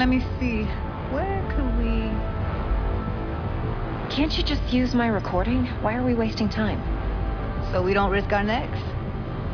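No faults detected anywhere in the recording.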